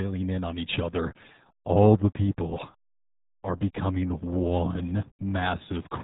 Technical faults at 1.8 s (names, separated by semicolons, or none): RealAudio 14.4 codec